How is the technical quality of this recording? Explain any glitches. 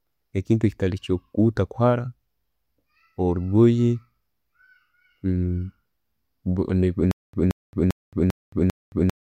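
One glitch spoils the tail end. From 7.11 s to the end, there's a stutter with silent gaps. A 176 ms fragment repeats five times, each followed by about 221 ms of dead silence, likely a stalled stream replaying its last buffer.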